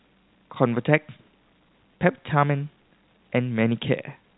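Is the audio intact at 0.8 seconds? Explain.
Yes, the audio is intact at 0.8 s, with nothing there beyond the G.711 telephone coding band limit that keeps everything below about 3.9 kHz.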